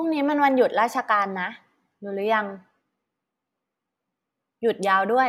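Nothing stood out as a technical fault on listening to the speech in this recording.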